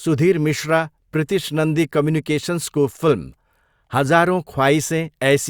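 No technical faults are audible anywhere in it.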